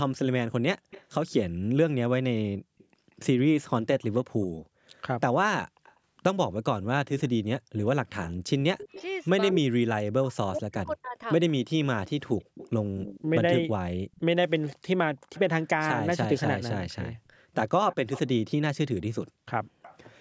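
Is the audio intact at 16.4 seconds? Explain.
Yes, the speech at 16.4 seconds is intact, with only the call microphone processing audible in its normal form, content stopping at about 8 kHz and the lowest bass rolled off.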